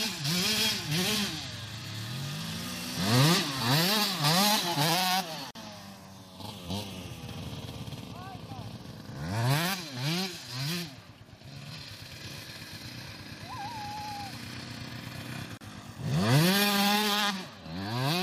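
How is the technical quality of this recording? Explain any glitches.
The recording has two brief dropouts, both from a gap at a join of encoded pieces. The audio was encoded in separate sections and joined without trimming, so the leading silence each encoder run adds and the padding in its final frame both remain at the seam. That opens a hole of about 45 ms at 5.51 s and about 36 ms at 15.57 s, with edges smeared by the codec, after which the sound resumes exactly where it broke off.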